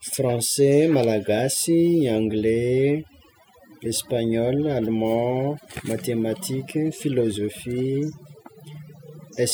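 From start to finish the gaps between phrases fall to near silence scattered with twinkling specks. That is overdone noise removal: a noise reduction stage was set far too strong, so any frequency band sitting close to its noise estimate gets pulled down hard or switched off. Quiet detail in the speech is swept away along with the noise, and the leftover isolated bands flicker in the background.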